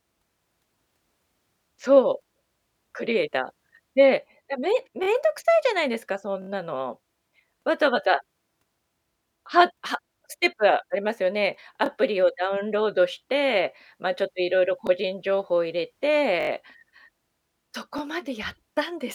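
Repeated buffers cause speech stutters at 5.04, 6.42, 11.86, 14.87, 16.41 and 17.98 s. Late audio made the device replay a piece of about 21 ms, which fits a 1024-sample buffer, with hard joins. The longest runs, at 6.42 and 16.41 s, repeat the piece three and four extra times.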